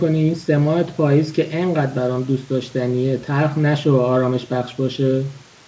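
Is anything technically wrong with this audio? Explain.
No, nothing here is technically wrong: the speech sits about 31 dB above a quiet bed of room noise, and the lack of anything above 8 kHz is just what a wideband call path like G.722 does.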